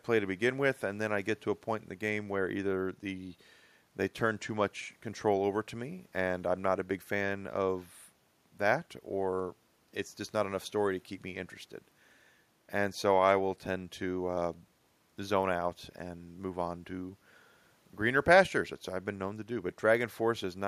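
No technical faults can be heard anywhere in the speech.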